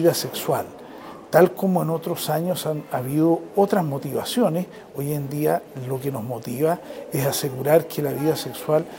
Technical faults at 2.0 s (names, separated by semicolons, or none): none